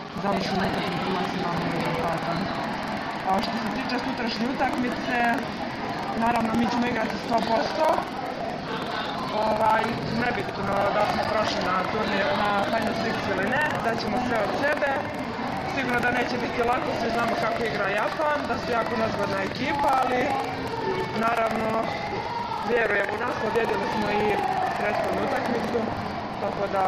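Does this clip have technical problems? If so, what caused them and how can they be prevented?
Yes. Buffer tearing runs throughout: a steady 21.5 Hz robotic rattle, fitting a 2048-sample buffer, where roughly a tenth of each period replays audio about 100 ms old. On a spectrogram it shows as evenly spaced vertical clicks. Keeping the writer safely ahead of the hardware read pointer prevents it.

A gap between stream segments at 11.24 s inserts 8.5 ms of silence with hard edges, visible as a sharp flat notch in the waveform. Aligning segment timestamps so consecutive segments meet exactly prevents it.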